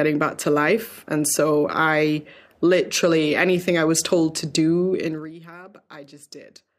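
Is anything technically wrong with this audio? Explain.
Yes. From 4.99 to 5.34 s, just after "was told to do", a rapid ticking, zipping texture rides on the speech as it drops by around 20 dB. This is zipper noise. The gain falls in unsmoothed 1 dB steps, about forty a second, and each jump clicks.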